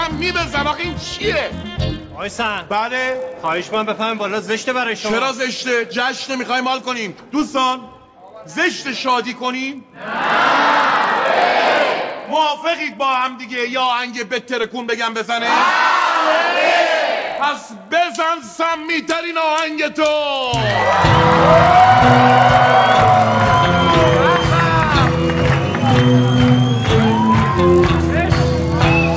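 The resampler restarted on every block throughout, converting each roughly 20 ms block in isolation, which fits a 48 kHz to 16 kHz conversion. Each block edge therefore carries a small error, producing a 50 Hz buzz that rides on the sound and is present only with signal.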